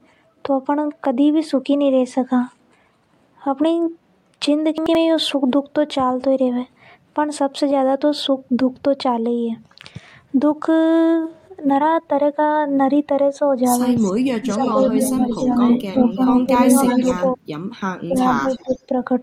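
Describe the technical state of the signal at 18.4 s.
Speech suppressed in double talk covers 18.04 to 18.92 s, so 18.4 s falls inside it. The level dips by up to about 20 dB, for roughly half a second in total. The likely cause is an echo canceller facing both sides talking at once. Unable to tell the local talker from returning loudspeaker sound, it turned everything down together.

Echo leak also spans 18.22 to 18.78 s. A faint delayed copy of the speech, lagging by 316 ms and sitting about 25 dB below it, rides underneath. This is likely residue from one side playing the call over a loudspeaker, where the echo canceller failed to strip all of the microphone pickup and sent the remainder back down the line.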